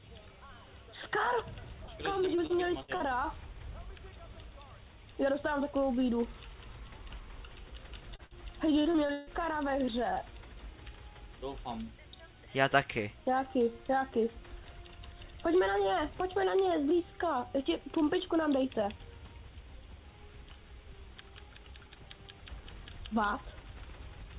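At 1.85 to 1.91 s comes a short concealed packet loss. About 30 ms of audio never arrived, and the receiver bridged it by extending the preceding sound before blending back in. It is heard as a brief smear or wobble. On a spectrogram the harmonics or noise run on unchanged for a moment, then blend into the real signal. The second short concealed loss, at 8.16 to 8.22 s, is nearly identical and also replaces about 30 ms.

From 2.36 to 3.03 s there is repeated packet loss, heard as robotic sound. Four separate gaps, the longest about 54 ms, were each patched by continuing the last sound, so roughly a fifth of that stretch is synthetic. It comes across as choppy. A spectrogram shows several short blocks of frozen, overly steady spectrum interrupting the natural movement, and the waveform shows repeated, too-regular cycles at each patch.

At 8.25 to 8.34 s, right after the second short loss, a burst of packet loss removes about 60 ms in one go. 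The concealment holds the last sound and turns it down, so it becomes a fading buzz or hiss, and the sound resumes further on with that portion gone. The waveform envelope visibly decays across the patch, and the spectrogram shows a smooth, dimming smear.

The worst stretch is 8.82 to 9.30 s, another run of repeated packet loss. Four gaps, one of them about 149 ms, leave half of the span concealed. This is choppy and broken, with whole pieces missing. A spectrogram shows long horizontal, static bands alternating with short bits of genuine audio.

All of this sits on a call path whose spectrum stops sharply at 4 kHz, which fits 64 kbps G.711 mu-law.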